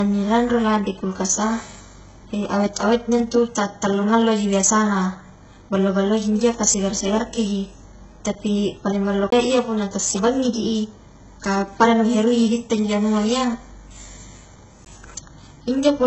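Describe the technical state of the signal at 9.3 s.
At 9.30 to 9.32 s there is a CD skip: a brief mute of roughly 20 ms, after which the speech resumes from a different point rather than where it left off. A knock or disc flaw threw the laser onto another turn of the spiral, so the player dropped out briefly and picked up elsewhere. The displacement is what separates it from a plain dropout: a dropout leaves a gap in otherwise continuous sound, while here the speech lurches forward or back.

Under that, and across the whole speech clip, the treble is heavily damaged. Nothing reaches above 8 kHz, and the upper band sounds synthetic, with gritty, metallic, lispy sibilants. That is likely HE-AAC compression at a very low bitrate, around 8 kbps. The codec keeps only the lower spectrum and fills the top by copying lower bands upward under a coarse envelope, so the upper harmonics fail to line up. 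A simple low-pass would sound dull instead of brittle.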